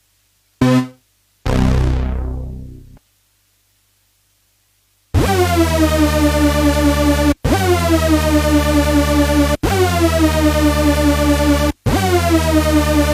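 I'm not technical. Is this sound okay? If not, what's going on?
Yes, this one's fine: nothing in it stands out as a technical problem, so there's nothing to worry about here.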